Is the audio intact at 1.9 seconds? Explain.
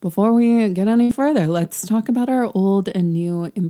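Yes, the audio is intact at 1.9 seconds, with no fault audible at that moment.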